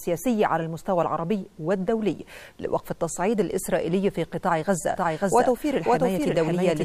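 From 4.93 s to the end of the clip the audio is doubled: a second, full-band copy of the same sound plays roughly half a second behind the first, at about the same loudness, so everything is heard twice in a flat, hard-edged echo with no decay or room colour. It switches in abruptly at 4.93 s. This doubled audio track is likely caused by the signal being captured again through a slower path, or by an edit leaving two offset copies.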